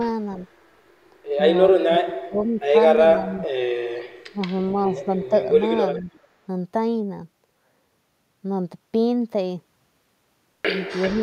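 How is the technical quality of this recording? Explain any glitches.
The recording has two recurring call-processing faults: the talker's level is repeatedly pulled down, and a faint delayed repeat of the voice appears twice.

Speech suppressed in double talk occurs at 1.73–2.74 s (dipping as much as about 30 dB), 3.14–3.36, 4.32–4.41, 4.88–5.0 and 6.0–6.09 s. The voice sinks or breaks up rather than repeating, most likely because an echo canceller ducked it while both sides spoke.

Echo leak appears at 5.84–6.19 and 11.02–11.14 s as a copy of the voice about 15 dB down, trailing by 390 ms. This is likely loudspeaker pickup that the far end's canceller missed, and it adds sound rather than removing it.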